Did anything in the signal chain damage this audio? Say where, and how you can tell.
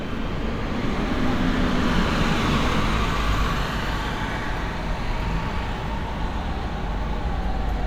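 Yes. A single loud pop sits on top of the audio from 3.66 to 3.68 s, peaking a few decibels above the surrounding sound, and the sound carries on uninterrupted beneath it. The likely cause is an electrical transient in the analogue stage, such as a plug, switch or static discharge, whose voltage step the following circuitry shapes into a brief thump. Because nothing is missing underneath, this is not a buffer dropout or edit click.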